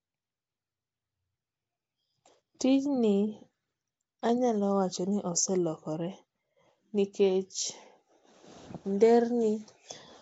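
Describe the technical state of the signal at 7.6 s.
At 7.6 s the speech is passing through what is likely Nellymoser compression, the Flash-era microphone codec, and this holds for the whole clip, not just this moment. The codec spends a fixed two bits per sample on blocks of 256 samples, giving weak bands no bits and filling them with noise. The damage is plainly audible: a hissy halo and a smeared, underwater quality, with nothing above 7.7 kHz, which fits a rate near 32 kbps.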